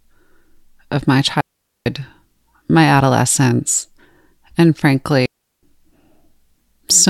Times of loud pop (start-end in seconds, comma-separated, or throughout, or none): none